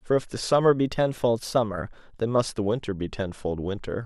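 From 0.72 s to 2.37 s the speech suddenly runs about 5.8% fast and sits roughly a semitone sharp (close to 98 cents), then snaps back to normal speed and pitch. That's a drift correction step. The likely cause is clock-matching software that jumped the playback rate in one go to drain its buffer, so speed and pitch moved together. You hear it as a brief chipmunk-ish lift in the voice, with an abrupt return.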